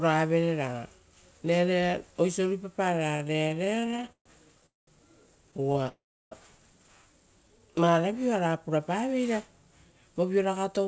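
From 3.12 to 4.65 s there's a run of repeated stalls (stutter): twenty short hold-ups where packets arrived late and the receiver kept stretching the last sound to cover them. That adds up to 384 ms of filler, about a quarter of that stretch, with the longest single gap at 133 ms. Nothing's actually lost, but the speech drags and hiccups.

Right after, from 4.66 to 4.90 s, the call audio freezes. The sound hangs for 210 ms and is silent for 180 ms of that before picking up where it left off. The same thing happens between two stutter patches: from 5.51 to 5.88 s there are seven tiny stalls, 94 ms filled in total, none longer than 21 ms. Then from 5.89 to 6.34 s comes a longer freeze of 426 ms, with 340 ms of silence. Both freezes are likely down to packets getting held up in transit until the jitter buffer ran dry. That pushes everything after them later by the same amount.

From 7.48 to 8.49 s the jitter buffer slow-down kicks in. 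The receiver builds its reserve back up by repeating tiny pitch-period slices, adding 134 ms in all, so the speech plays at roughly 87% speed. The pitch stays put, and sounds come out drawn out.

The clip closes with a jitter buffer speed-up from 10.01 s to the end. The buffer is holding too much, so it trims about a tenth of a second in small pitch-sized cuts. The speech runs at roughly 109% speed and sounds a bit hurried, still at its normal pitch. Throughout, nothing comes through above 8 kHz, which fits the G.722 call codec on this path.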